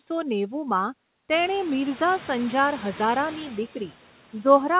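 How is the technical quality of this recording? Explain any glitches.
Noise suppressor artifacts run through the whole recording. The background noise dips during pauses and swells back beneath the speech. A suppressor is estimating the steady noise frame by frame and pulling those bands down by about 12 dB. The room noise climbs by about 19 dB at around 1.5 s, still sitting about 18 dB below the speech. Nothing is heard above 4 kHz, which fits a narrowband G.711 call path.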